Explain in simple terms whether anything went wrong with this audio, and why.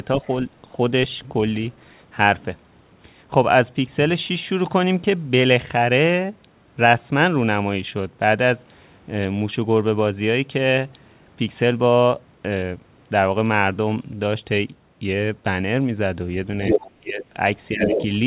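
Near the end, the echo canceller likely failed to fully remove the other side of the call, picked up from the loudspeaker. That other side's voice leaking through can be heard from 16.62 to 16.91 s, about as loud as the talker, and again from 17.71 to 18.06 s, a little quieter.

The same echo canceller likely couldn't tell the talker apart from that echo while both sides spoke at once, so it turned everything down. This is speech suppressed in double talk. The talker's voice sinks sharply from 16.99 to 17.25 s, and dips more gently from 17.72 to 17.96 s.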